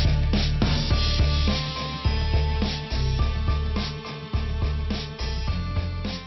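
Nothing here stands out as a technical problem; the audio just carries on as it should with nothing to flag.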